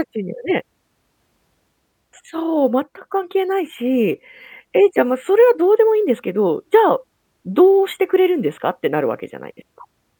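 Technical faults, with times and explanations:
No technical faults detected anywhere in the speech recording.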